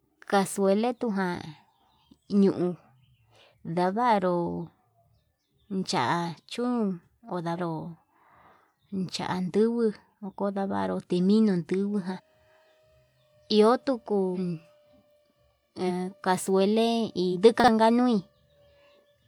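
Compressed frames skipped at 7.55–7.59, 10.11, 12.16–12.20, 14.34–14.38 (right after "iho tuku"), 15.87–15.91 and 17.32–17.36 s. Each time, whole 42.7 ms frames never reach the output, so the speech jumps forward by roughly 100 to 500 ms.

Chunks out of order at 17.60–17.68 s. A 40 ms chunk plays one chunk late, producing a jumbled instant with three hard joins.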